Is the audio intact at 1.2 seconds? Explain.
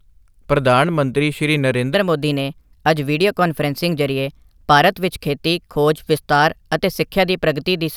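Yes, the speech at 1.2 seconds plays through intact, with no dropout, glitch or other fault at that moment.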